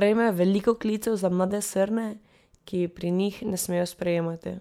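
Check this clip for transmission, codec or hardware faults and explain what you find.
The speech signal stays steady and continuous, with no audible fault from the transmission path, the codec or the hardware.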